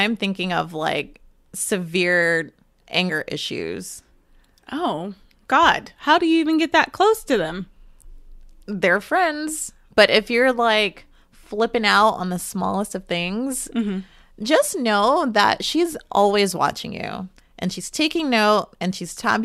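No technical faults are audible anywhere in the speech.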